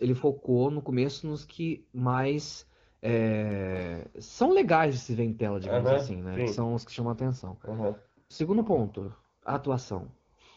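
An AMR rate drop from 5.82 to 9.12 s, consistent with 23.85 falling to 8.85 kbit/s, leaves fewer bits for the speech, which turns rougher and more synthetic without any gap.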